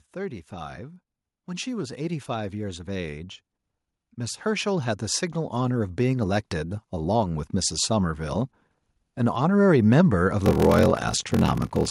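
Speech, with automatic gain rising twice: the gain control judged the input too quiet and raised its gain gradually, swelling voice and background together by about 4 dB from 1.63 to 3.36 s and about 7 dB from 4.15 to 8.23 s. From 10.44 s to the end, a block size mismatch (padded) appears. One stage writes shorter blocks than the next reads (which fits a 1024-sample read), and the zero-filled remainder adds a 43.1 Hz buzz and slows the speech to 0.861 of normal speed with its timbre unchanged.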